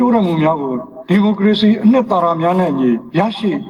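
Gain pumping runs through the whole audio: the level swings by around 10 dB as the gain is pulled down on each loud sound, with loud and quiet passages squeezed close together. The likely cause is input gain set far too high, with a fast limiter clamping each peak. On the waveform, peaks sit flattened at a near-constant ceiling while the quiet stretches between them visibly rise. On a spectrogram, the gaps brighten and darken under each loud event.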